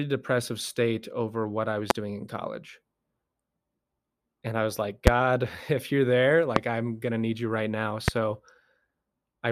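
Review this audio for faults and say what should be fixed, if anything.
Four loud pops land on top of the speech at 1.90–1.93, 5.07–5.10, 6.56–6.59 and 8.08–8.11 s, about 20 to 25 dB above it, with the talking carrying on underneath. They're likely voltage spikes from a loose connector, switch or static. Seat and ground the cabling properly.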